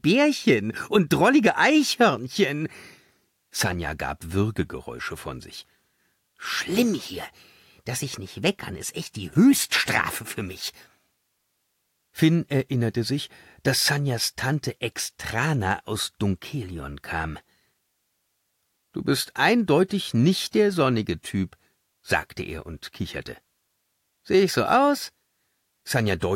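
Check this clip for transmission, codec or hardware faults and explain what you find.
Two short bursts of loose connector crackle are present, one from 6.68 to 6.75 s and another from 9.32 to 9.37 s, each lasting well under a tenth of a second. A worn or dirty contact is making and breaking as it shifts, chopping the signal on and off, so each burst comes across as a ragged scratch over the sound. On a waveform these appear as clusters of sharp, irregular spikes and dropouts; a spectrogram shows them as thin broadband vertical streaks.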